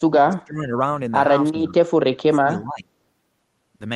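A speech recording where the talker's level keeps collapsing: from 0.04 to 0.76 s it sinks by roughly 30 dB, again from 1.54 to 1.78 s by about 15 dB, and from 2.18 to 2.89 s by about 25 dB. That's speech suppressed in double talk, likely an echo canceller ducking the near talker while the far end spoke. The call-codec coloring, with the top end stopping around 12 kHz, points to Opus at a modest bitrate.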